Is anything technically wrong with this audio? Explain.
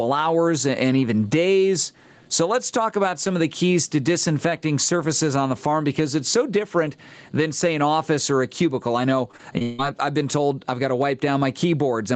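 Yes, there are two faults in this speech.

Gain pumping runs throughout. The input gain is likely set far too high, so a fast limiter clamps down on every loud moment, with swings of roughly 10 dB. Loud and soft parts end up closer in level, leaving the speech squashed and breathing.

Repeated packet loss (robotic sound) hits from 9.31 to 9.80 s. Audio arrived missing or late several times in quick succession, apparently in about four holes, the longest around 160 ms. Each hole was patched by stretching the preceding sound, so nearly half that span is synthetic. It comes out choppy. The call path's usual cutoff near 8 kHz is audible as a dull top end.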